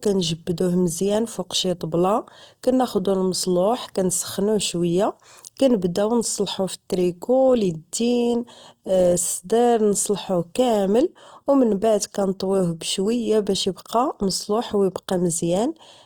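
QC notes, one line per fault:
Throughout, Opus compression: the speech sounds grainy and rough, with noisy upper bands, likely from Opus music-mode coding at a starved rate near 24 kbps.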